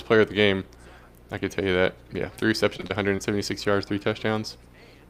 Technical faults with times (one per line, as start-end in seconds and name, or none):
2.39-3.20 repeated packet loss (robotic sound)